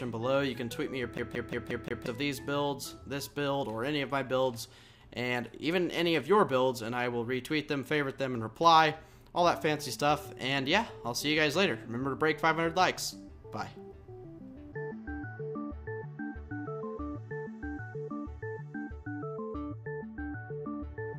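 From 1.18 to 2.06 s the CD gets stuck on one turn: a 177 ms slice repeats five times, with tiny mutes at each laser jump, the classic skipping stutter.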